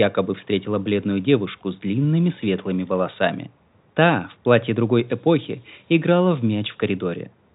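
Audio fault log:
5.08–6.83 s, low bit depth with noise shaping: right after "в платье другой" the speech drops to what sounds like 7 bits, and a thin, steady hiss climbs in, sitting only around ten decibels under the voice. The rounding error has been pushed up the spectrum, so the hiss is brightest at the top, crowding just under the telephone band's ceiling of about 3.8 kHz, while the G.711 coding underneath stays clean.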